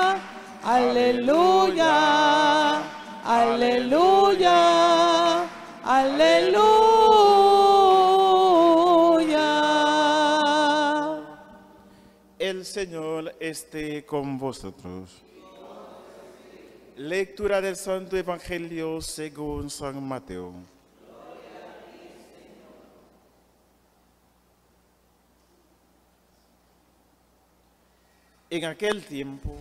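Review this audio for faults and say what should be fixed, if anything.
A single loud pop occurs near the end, from 28.92 to 28.94 s. It peaks roughly ten decibels above the surrounding sound, which carries on beneath it. A sudden voltage step, likely from a plug, switch, static discharge or driver glitch, was added to the signal, and the following circuitry shaped it into a brief pulse. On a waveform it appears as one tall, narrow spike. On a spectrogram it is a thin vertical stripe spanning all frequencies. To prevent it, secure connections and avoid switching or touching equipment while recording.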